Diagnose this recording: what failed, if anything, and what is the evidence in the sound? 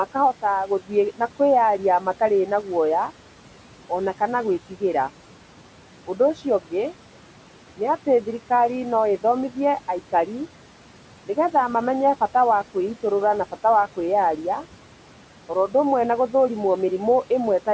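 The failure is in call processing. Noise suppressor artifacts run through the speech clip. The room noise, about 19 dB below the speech, sinks about 12 dB between words and rises under them. The suppressor lowers steady-noise bands frame by frame.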